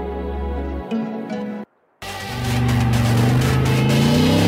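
At 2.75 s, a block of digital silence: about 2.7 ms of samples, which fits a 128-sample buffer, was zeroed, so the sound drops out abruptly, heard as a single tick.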